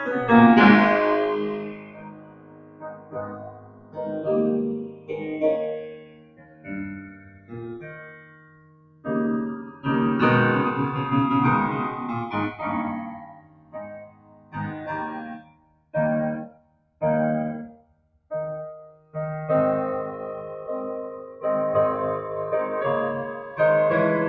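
The clip is music, carried through call microphone processing with nothing above 8 kHz. The channels are drifting apart. The two sides run on separate clocks, roughly 70 ppm apart. Their offset creeps to around 2 ms by the end. Heard in mono, the comb notches sweep slowly, giving a slow flanging. A noise suppressor was applied to music throughout. It treats held tones and reverb tails as noise. Its gain swings by around 20 dB, so the music pumps and thins while attacks get through. The sound is cut by the noise suppressor in eight places: 1.54–4.0 s, 4.83–5.27 s, 5.8–9.06 s, 9.7–9.85 s, 13.1–15.94 s, 16.49–17.01 s, 17.71–18.31 s and 18.86–19.15 s. Sustained parts sink there, by up to about 15 dB, and tails end early.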